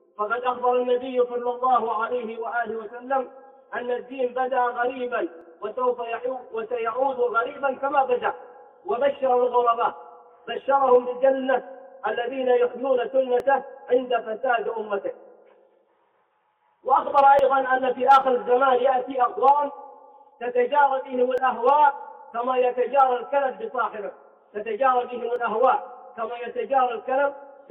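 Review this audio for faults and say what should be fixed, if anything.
Small clicks or skips at 5.41, 13.40, 17.39, 21.38 and 25.36 s, spaced at multiples of about 4 s, come from overlap between stream segments. Adjacent 4 s segments carry overlapping time stamps, so the player trims 5 to 12 ms of audio that was never duplicated, and the waveform jumps. Fix it by making each segment's start time match the previous segment's end exactly when packaging the stream.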